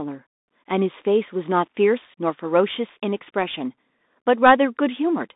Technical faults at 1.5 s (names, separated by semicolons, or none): Bluetooth CVSD headset codec